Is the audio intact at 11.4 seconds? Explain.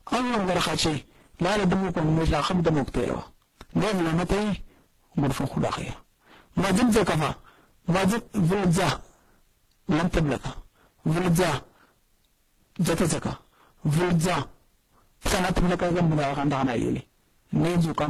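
No. At 11.4 seconds the speech is hard clipped, as it is throughout the clip. It is driven about 30 dB past what the signal path can carry, so roughly a third of the waveform is sliced flat. Those flat tops add harsh upper harmonics, heard as a constant buzzing fuzz on every loud sound.

The audio at that moment also carries mixed coding artefacts, likely from transcoding between lossy codecs. There is nothing above 12.5 kHz. Different coding artefacts are heard layered together, which points to a low-rate Opus encode passed through WMA and then HE-AAC. Each stage adds its own damage on top of the last.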